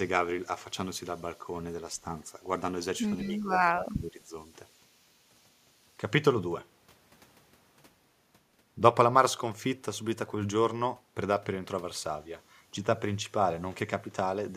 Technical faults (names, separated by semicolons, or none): speech suppressed in double talk; echo leak